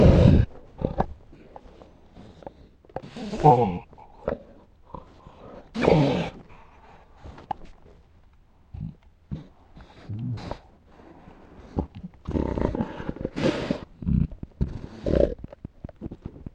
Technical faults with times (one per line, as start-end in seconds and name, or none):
12.39-16.48 train of clicks